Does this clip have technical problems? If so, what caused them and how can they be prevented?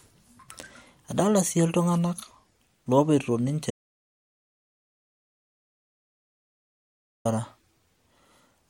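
Yes. The speech has an audio dropout to silence from 3.71 s to 7.25 s: it cuts off mid-flow, stays out for about 3.5 s, and comes back mid-flow. Unlike a natural pause or a noise gate closing, the gap holds silence with no room tone at all. That likely means the input was lost while the recorder kept writing silence. Securing connections and monitoring the input level live would prevent it.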